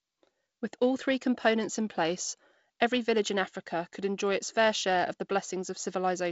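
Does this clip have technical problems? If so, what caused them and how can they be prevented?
No, nothing here needs fixing: the speech comes through G.722 wideband telephone coding at 48 kbit/s, which accounts for the faint upper-band hiss and the top end stopping at about 7.7 kHz.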